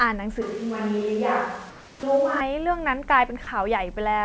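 From 0.42 to 2.41 s the close microphone's signal was likely lost and a distant microphone took over. The sound turns abruptly roomy and hollow, with thinner bass and more background noise, though the overall level barely changes. It switches back just as suddenly.

Between 1.70 and 2.03 s the sender's voice detector likely stopped transmitting during a pause, and the receiver filled the 330 ms gap with comfort noise in place of the background. The real background, which sits about 24 dB below the loudest sound, gives way to a steady, featureless hiss about 3 dB quieter.

At 2.00 s the voice detector was likely slow to register that sound had resumed, so the onset was clipped by the voice detector. The first 30 ms went unsent and were covered by comfort noise, and the sound starts abruptly without its soft beginning.

At 3.44 s the detector likely mistook part of the speech for background, so the sound was dropped by the voice detector. 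About 20 ms of speech vanishes into a 30 ms patch of flat synthetic noise before the signal returns. Across the whole clip, the G.722 call path leaves nothing above 8 kHz.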